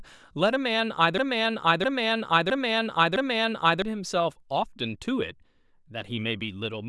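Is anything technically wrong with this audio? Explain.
Yes. A broken-record loop runs from 1.18 s to 3.82 s: a 0.66 s fragment of the speech repeats exactly, back to back, four times. The player or stream likely stalled and kept replaying its last buffer, so the speech that belonged there is missing.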